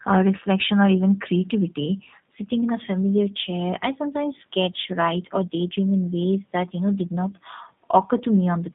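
From the first moment to the last, this speech has the G.729 codec sound. The band sits between about 150 Hz and 3.7 kHz, so there's no air on top and little weight below. The codec rebuilds each 10 ms frame from a vocal-tract filter, a pitch predictor and a handful of pulses rather than the real waveform. That's why it comes across as plainly rough, slightly buzzy and synthetic, which fits an 8 kbit/s G.729A stream.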